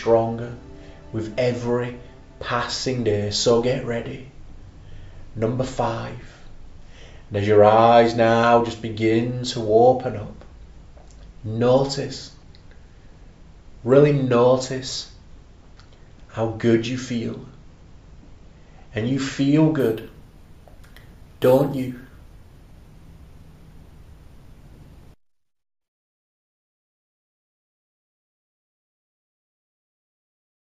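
From 19.80 to 27.80 s the audio shows imaging from sample-and-hold upsampling. The rate was raised by holding each sample until the next, without a smoothing filter, which points to an original rate of about 16 kHz. A mirrored copy of the spectrum lands from 8 kHz to 16 kHz, about 26 dB below the signal, heard as a metallic fizz that rises and falls with the sound. A spectrogram shows a flipped echo of the content above 8 kHz; zoomed in, the waveform shows small stair-steps.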